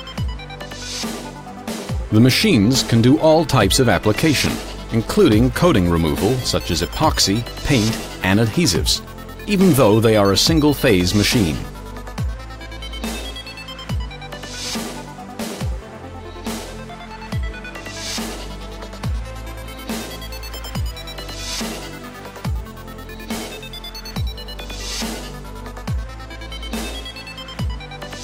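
Nothing stood out on listening to this recording.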